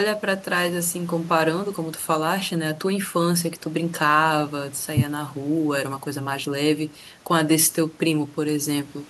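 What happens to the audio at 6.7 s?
Nothing goes wrong at 6.7 s; the speech carries straight through that moment with no audible fault.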